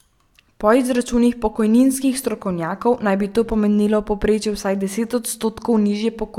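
No technical faults are audible.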